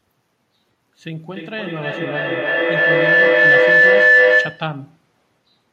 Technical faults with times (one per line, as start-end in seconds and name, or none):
1.33-4.83 feedback howl